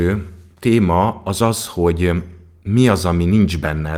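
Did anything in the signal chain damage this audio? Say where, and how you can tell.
No, nothing in the signal chain damaged this audio.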